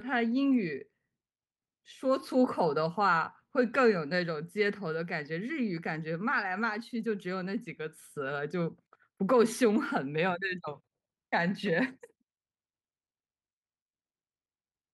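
Speech with no technical faults.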